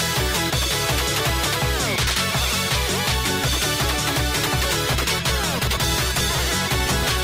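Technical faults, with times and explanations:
4.35–7.24 s, adaptive stream at a lower bitrate: the quality abruptly drops with more codec artefacts, with no gap at the switch, which fits the stream dropping from about 64 to 24 kbit/s Opus as the connection slowed.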